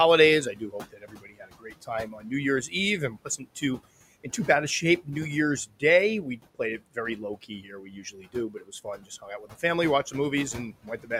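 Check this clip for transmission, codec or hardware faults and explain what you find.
The clip is speech processed by a noise suppressor, and it shows two related faults.

Noise suppressor artifacts run throughout: the suppressor pulls down bands it judges to be steady noise, frame by frame, cutting the room noise (sitting about 18 dB below the speech) by about 18 dB. What survives dips between words and rises under them.

Speech cut by the noise suppressor occurs at 0.53–2.31 s, 3.1–3.79 s (ending just before "in too bad a"), 5.66–5.83 s, 6.37–9.63 s (ending before "watched the") and 10.53–11.11 s (after "watched the"). The suppressor mistook quieter speech for noise and lowered it by about 16 to 19 dB, so parts of the speech sound swallowed or faint, roughly a second in the first span and a second and a half in the fourth.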